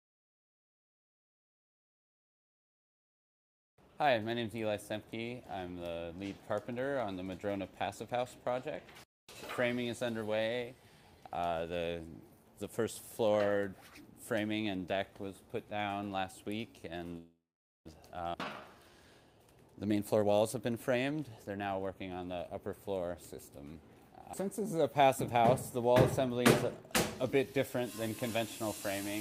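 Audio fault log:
17.17–17.88 s, call audio freeze: the sound stalls for about 0.7 s. It starts with a short fading tail, a smeared continuation of whatever was playing, then drops to silence for roughly the last half second before picking up exactly where it left off. Nothing seems to be lost; the gap is just inserted. That's likely packets getting held up in transit, so the jitter buffer ran dry and the receiver had to stretch the last bit of audio until data turned up again.
18.33 s, skip ahead: right after the freeze recovers there's an abrupt jump forward. About a fifth of a second of audio simply isn't there, and the two sides are butted together with essentially no gap, so you hear a sudden splice rather than a pause. This is what happens when a stretch of audio is dropped in transit or thrown away by an overflowing buffer while later audio is already waiting.
18.44–18.92 s, jitter buffer slow-down: for about half a second the audio drags, playing at roughly 78% speed while the pitch stays put. 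Sounds get drawn out. The receiver is repeating individual pitch periods over and over, adding around 0.12 s in total, to rebuild a safety margin in a buffer that was running low.
19.33–22.17 s, jitter buffer speed-up: now the opposite happens for nearly three seconds. The audio runs at about 120% speed with the pitch unchanged, so it comes across as rushed and clipped. The buffer has overshot and is holding more than it wants, so the receiver keeps trimming out tiny slices a pitch period or so long, shaving off around half a second overall to bring the delay back down.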